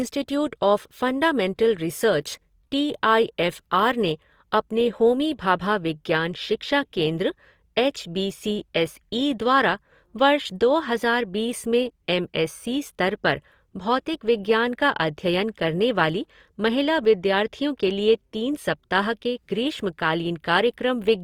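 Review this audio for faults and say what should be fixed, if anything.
Throughout, the speech sounds grainy and rough, with a noisy texture where high bands are filled rather than cleanly reproduced, though content reaches about 20.3 kHz. This points to Opus compression, likely in its CELT music mode at a low bitrate around 24 kbps. To prevent it, encode from the original source at a higher Opus bitrate, or keep an uncompressed master.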